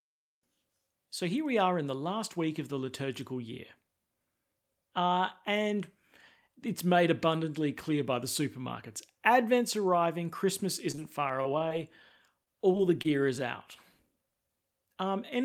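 Packets were repeatedly lost or late from 10.91 to 11.72 s and again from 12.44 to 13.06 s, just before "is out". Each hole was patched by stretching the preceding sound. This repeated packet loss leaves the speech choppy, with gaps of up to 23 ms.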